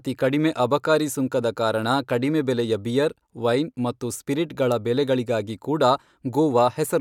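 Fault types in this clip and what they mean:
Dropped samples: a single sharp click at 5.50 s in the speech, likely from a couple of samples going missing so the waveform jumps ahead.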